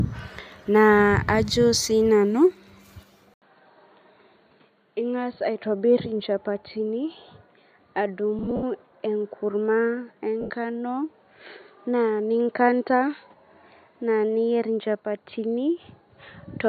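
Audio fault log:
3.34 s to the end: input switched to a poorer device. After an 80 ms gap the sound turns duller and boxier, about 5 dB quieter, with nothing above 4.4 kHz and fresh background noise roughly 45 dB down. This is likely a switch to a headset or lesser microphone.
8.39 to 8.63 s and 10.41 to 10.50 s: lost LE Audio frames. About 130 ms drops out in runs up to roughly 70 ms, then 90 ms at once. The LC3 decoder replays the last spectrum with random signs, so the sound smears into noise and fades.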